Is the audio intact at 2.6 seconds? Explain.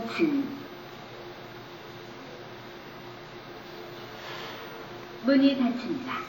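No. At 2.6 s, as throughout, this is likely transcoding between lossy codecs, an MP3-like stage then WMA, so two layers of compression artefacts are heard together.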